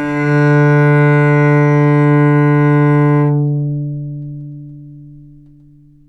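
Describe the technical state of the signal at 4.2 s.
At 4.2 s the signal is intact, with no dropout, clipping, distortion or other technical fault to be heard.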